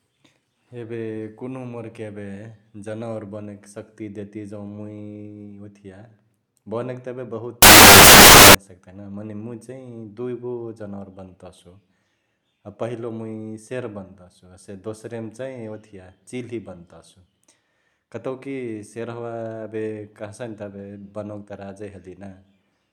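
Samples built from the wrong bytes, 7.62 to 8.55 s in this speech recording: misassembled bytes turn low bits into loud, harsh broadband noise, ending just before "सक्तही ना मने".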